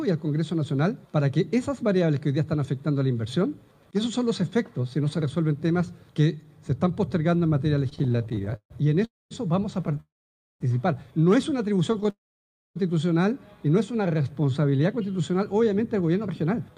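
From 7.89 to 9.03 s, packets kept arriving behind the playback clock and the jitter buffer ran dry 21 times, giving repeated stalls (stutter): the receiver stretched the last sound to cover roughly 350 ms, with the longest gap 143 ms, so about 31% of that stretch is concealment and the audio drags and judders. Straight after, from 9.05 to 9.33 s, comes a call audio freeze. The sound carries on briefly as a fading continuation, then drops to silence for about 220 ms before resuming where it left off, adding a 260 ms gap with nothing lost. The likely cause is packets held up in transit until the buffer emptied. The same pairing recurs twice more. A short stutter runs from 9.87 to 10.00 s (4 gaps, longest 14 ms), followed by a 600 ms freeze from 10.00 to 10.62 s with about 540 ms of silence. Another stutter runs from 11.93 to 12.10 s (5 gaps, longest 10 ms), followed by a 659 ms freeze from 12.10 to 12.78 s with about 590 ms of silence. 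Finally, from 13.96 to 15.70 s, a jitter buffer slow-down builds up a reserve. The buffer repeats single pitch periods and slivers of pauses to add 177 ms, so the sound plays at 90% speed without a change in pitch, drawn out.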